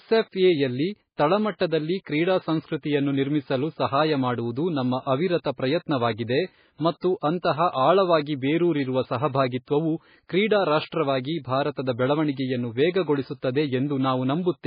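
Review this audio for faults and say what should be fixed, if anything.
The whole clip has that watery, swirly MP3 compression sound, likely from a very low bitrate, something around 16 kbps. The encoder ran short of bits, so it dropped everything above 5 kHz and let weak detail flicker in and out from frame to frame. To prevent it, re-export from the original source at a much higher bitrate, or keep it uncompressed.

There's pre-echo from 10.87 to 10.92 s: a short hiss smeared about 51 ms ahead of a sharp attack. The codec spread noise sized for the loud moment across its whole block, so it leaks into the quiet gap before the attack. More bitrate and an encoder that switches to short blocks on transients would stop it.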